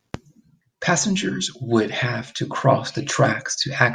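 No technical faults can be heard in the speech.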